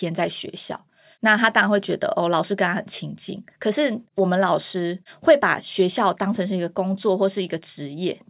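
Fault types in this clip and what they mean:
No technical faults can be heard in this speech recording. There is nothing here that calls for a line of its own.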